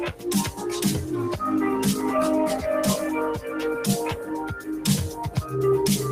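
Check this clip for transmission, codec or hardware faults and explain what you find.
One fault stands out: sound cut by the noise suppressor, from 4.6 to 4.85 s. The suppressor misjudged this passage as noise and pulled it down by up to about 9 dB for roughly a third of a second, so the sound sinks in level. On a waveform the envelope visibly narrows there; a spectrogram shows the energy fading across the band before recovering.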